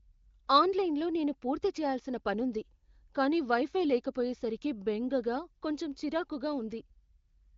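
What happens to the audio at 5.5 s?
At 5.5 s the speech continues intact with no fault, carried through the AMR wideband (HD Voice) codec at about 23 kbit/s, with the band stopping near 7.5 kHz.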